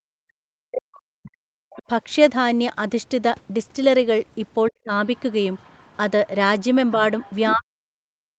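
Right from the start, 0.0 to 1.45 s, the speech is pushed way down, by about 40 dB at its deepest. That's speech suppressed in double talk. Both sides were likely talking at once, so the echo canceller couldn't tell the local talker from the loudspeaker echo and clamped down on everything. It happens again briefly at 4.69 to 4.92 s with a dip of about 35 dB, then from 7.54 s to the end at about 40 dB.

At 1.7 to 1.82 s a faint scrap of a second voice comes through, about 20 dB under the speech. That's the other side's voice leaking through, likely loudspeaker playback the echo canceller didn't fully remove from the mic. A longer, stronger stretch runs from 6.59 to 7.55 s at about 15 dB down. Like everything else on this Opus call path, it has nothing above 8 kHz. It hands off almost directly into that last suppression.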